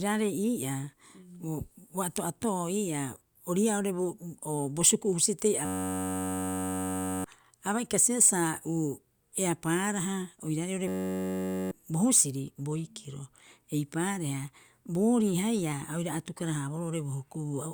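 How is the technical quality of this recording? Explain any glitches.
The recording has two glitches, both a system hang loop. The first runs from 5.65 to 7.24 s, the second from 10.88 to 11.71 s. In each, the system froze while the sound hardware kept replaying its ring buffer. A 10.67 ms slice of speech repeats exactly. That gives a steady buzz at about 93.8 Hz, which fits a 512-sample buffer. About one and a half seconds of speech is lost in the first, under a second in the second.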